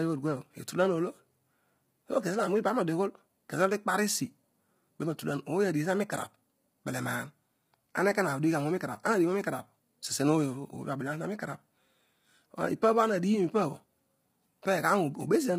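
Low-delay AAC compression runs throughout the speech. The voice sounds rough and grainy, with noise filling the gaps between harmonics and nothing above 15.7 kHz. The likely cause is AAC-ELD's short frames resolving pitch poorly. The heavy damage fits a bitrate near 24 kbps.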